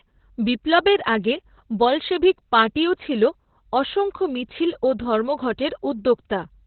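From start to finish the speech has passed through Opus voice compression running at a very low rate, with the sound pointing to around 8 kbps in its SILK linear-prediction mode. The encoder has narrowed the band to telephone width, so nothing survives above about 4.3 kHz, and the excitation is coded coarsely. As a result the speech sounds muffled and dull, with a hoarse, slightly robotic buzz running through it.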